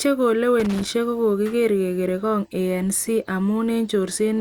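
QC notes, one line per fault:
0.60–0.90 s, loose connector crackle: an irregular burst of scratchy crackle lasting about 0.3 s, just before "kokokiger kokere'ngok". A worn or dirty contact is rapidly making and breaking, chopping the speech signal, and any DC on the line adds pops.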